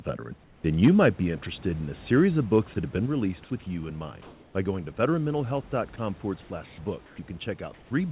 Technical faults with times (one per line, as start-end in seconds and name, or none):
0.44-0.64 comfort noise in place of the background
3.06 microphone volume stepped down
4.22-4.54 comfort noise in place of the background
5.96-5.98 sound dropped by the voice detector
6.42-6.78 comfort noise in place of the background
7.06-7.18 comfort noise in place of the background
7.74-7.90 comfort noise in place of the background